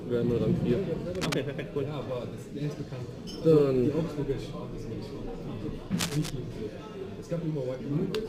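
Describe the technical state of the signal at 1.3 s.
At 1.3 s there is cable scratch noise, from 1.15 to 1.34 s: dense, uneven scratching just below the signal level, likely from a worn connector's contact resistance fluctuating.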